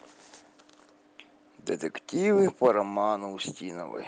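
From 2.64 to 2.71 s the loudest part of the speech takes on a harsh, crackly edge, most likely from microphone overload: the input was driven about 4 dB past what the converter could represent, so the tops of the peaks were sheared off. On a waveform those cycles appear as flat plateaus where the converter's limit cut them, covering a small share of the samples, and a spectrogram shows a brief smear of broadband energy climbing well above the normal harmonics.

Within that burst, at 2.67 s, the whole signal drops by about 2 dB in a single step. This is a microphone volume stepped down, with the call software likely reacting to the clipped peak by lowering the device's input gain at once. The speech and the background fall together, so the change sounds like a slight sudden retreat rather than a fade. A waveform shows the envelope stepping down abruptly with no ramp, and a spectrogram shows every band dimming at the same instant.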